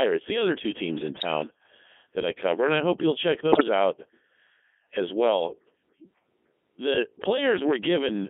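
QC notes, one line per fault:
Throughout: Codec 2 vocoder. The speech has passed through a very low-rate parametric vocoder, which fits Codec 2 at its 3.2 kbit/s mode, confined to a telephone-style band of roughly 250 Hz to 3.4 kHz. Only pitch, voicing, energy and a coarse spectral envelope survive. The decoder rebuilds the voice from sine waves, not the original waveform, so the damage is heavy: the speech comes out buzzy and robotic, with a synthetic timbre.
1.15 to 1.25 s and 3.52 to 3.63 s: bit errors on digital voice radio. Corrupted bits reached the vocoder's parameter stream. The first burst follows "other two teams in" and is consistent with around 3 percent errors over a few frames. The second, after "I hope you'll check", is harsher, nearer 7 percent. Each flipped bit scrambles a frame's pitch, level or spectrum, so the voice jumps and warbles into brief bleeps and robotic gibberish.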